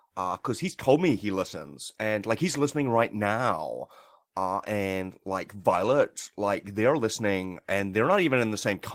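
A short speech recording with no technical fault to report. There are no problem times or causes to point to anywhere in it.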